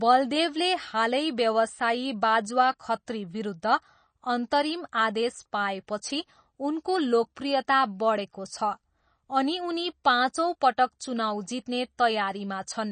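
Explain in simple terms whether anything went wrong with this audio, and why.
The audio was likely squeezed hard by MP3 compression, which saves space by discarding detail. Throughout the speech, everything above about 9 kHz is missing, so it sounds dull, and the remaining sound has a watery, swirling quality, with metallic chirps on s sounds.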